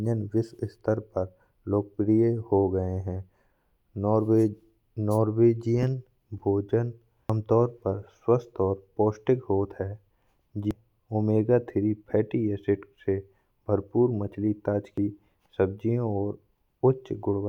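Speech clip with damaged data in a compressed stream: brief glitches at 7.30 s, 10.71 s just before "ओमेगा तीन", and 14.98 s after "एसिड से भरपूर मछली", each a decoder losing sync, unlike the harsh distortion on loud peaks from clipping.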